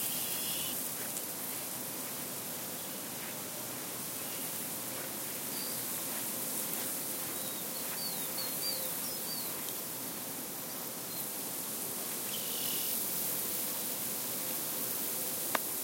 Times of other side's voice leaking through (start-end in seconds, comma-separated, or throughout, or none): none